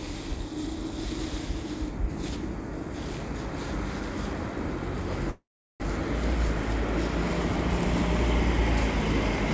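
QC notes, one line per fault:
5.30–5.82 s, call audio freeze. The sound halts. A short continuation of the last sound fades into about 0.37 s of silence, then the audio resumes where it stopped. Likely cause: delayed packets emptied the jitter buffer, inserting a half-second gap with nothing lost.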